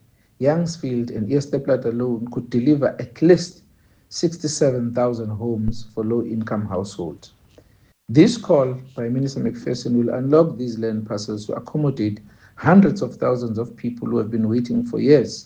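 A deep, dull thump lands at 5.68 s and dies away by 5.94 s, peaking at about -14 dBFS and decaying within roughly 58 ms. This is a phantom power thump: supply voltage switched on or off on a live input, its step pushed through the coupling capacitors.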